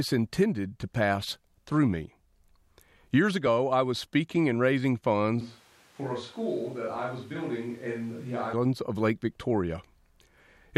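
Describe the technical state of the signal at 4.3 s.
At 4.3 s the speech signal is intact, with no dropout, click, distortion or other fault audible at that moment.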